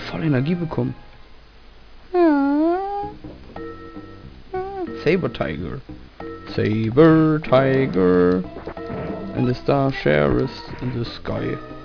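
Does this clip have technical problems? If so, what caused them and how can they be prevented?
No, no technical problems heard.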